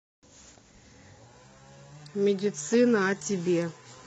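At 1.27 s the adaptive stream switches to a lower bitrate and stays there to the end. Speech suddenly turns swishy, with codec artefacts that fit a low-rate HE-AAC stream. A spectrogram shows clean highs giving way to blurred, patchy upper bands, with no waveform gap.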